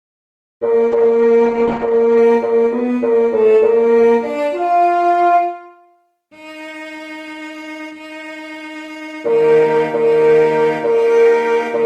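The audio has two separate faults. From 0.92 s to 2.23 s there is a call bitrate drop. The upper frequency limit falls from 12 kHz to 8 kHz, and the sound turns coarse and dull. The worst stretch lasts about 1.25 s before quality recovers. This degradation fits the encoder cutting from about 32 kbps to roughly 10 kbps after the bandwidth estimate fell, which forced coarser coding and removed content above 8 kHz. From 7.33 s to 9.91 s the pace jumps to 1.35 times normal speed while the pitch stays the same, giving a rushed quality. This is likely a time-stretched section, where software compressed the audio to a target length by dropping short pieces rather than resampling. That preserves pitch.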